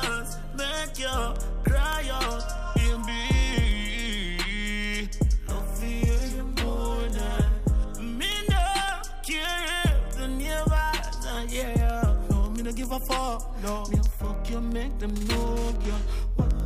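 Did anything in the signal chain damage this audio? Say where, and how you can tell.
Yes: sharp ticks of uneven strength repeat about ten times per second from 0.14 s to 16.6 s. These are word clock ticks from an unlocked digital link, with a clock mismatch of a couple of hundred ppm slipping single samples.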